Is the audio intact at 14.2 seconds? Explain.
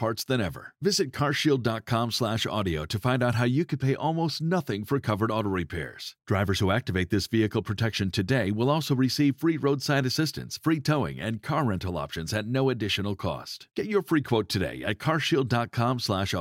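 Yes, the speech at 14.2 seconds plays through intact, with no dropout, click, distortion or other fault at that moment.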